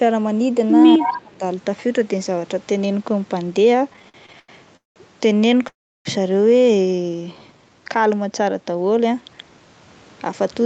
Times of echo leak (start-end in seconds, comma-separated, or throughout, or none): 1.03-1.20